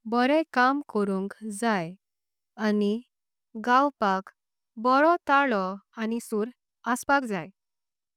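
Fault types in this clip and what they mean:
Time-stretched section: From about 6.09 s to the end, the speech suddenly runs roughly 1.44 times faster while the pitch stays exactly where it was, so it comes across as rushed rather than chipmunk-like. That pairing points to software that was likely squeezing the tail to fit a shorter slot, keeping pitch by dropping short slices, and that squeeze is what gives the ending its hurried feel.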